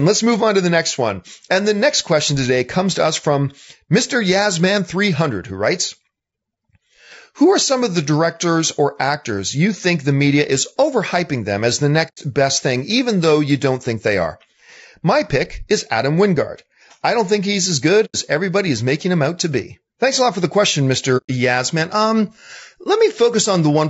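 A speech recording with a rough, grainy texture throughout, noise filling the gaps between harmonics, consistent with low-delay AAC compression, likely AAC-ELD at roughly 32 kbps. AAC frame loss with muting leaves soft-edged holes about 0.1 s long at 12.08–12.18 s (after "overhyping them as the"), 18.05–18.16 s (after "think he's as good") and 21.17–21.30 s (after "lot for the question"), where the decoder zeroed missing frames.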